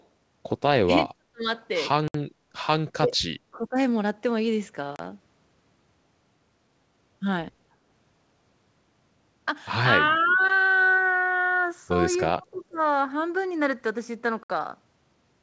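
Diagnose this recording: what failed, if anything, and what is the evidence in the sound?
Echo leak, at the call-processing stage: a delayed copy of the sound, trailing by 328 ms, appears at 0.00–0.06 s, 10.26–10.49 s and 12.54–12.77 s, roughly 25 to 40 dB below the main signal. On a spectrogram it shows as faint, offset repeats of earlier harmonic patterns. This is likely an echo canceller letting loudspeaker pickup return.

Speech suppressed in double talk, also in call processing: the level sinks at 0.83–1.45 s, 3.00–3.77 s, 10.13–10.41 s and 12.34–12.81 s, by up to about 40 dB at worst. The waveform envelope shows sudden dips a few hundred milliseconds long. The likely cause is an echo canceller that could not tell the local talker from the far-end echo and attenuated both.

Block of digital silence, at the driver or buffer stage: hard dropouts occur at 2.08–2.14 s (64 ms), 4.96–4.99 s (32 ms) and 14.43–14.50 s (64 ms). 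The waveform shows flat near-silent runs with vertical edges, and the spectrogram shows blank columns with broadband lines at the boundaries. Their lengths fit unfilled output buffers of 1024 and 512 samples.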